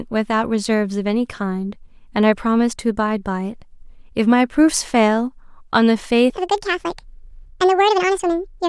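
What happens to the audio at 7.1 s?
At 7.1 s the speech is inside a section at the wrong speed, running from 6.30 s to the end of the clip at 8.68 s. That stretch plays 1.73 times faster than it was recorded, likely because it was fitted to the wrong clock during editing or playback. Since speed and pitch shift together, the voice jumps up by roughly ten semitones and sounds squeaky and hurried until the audio ends.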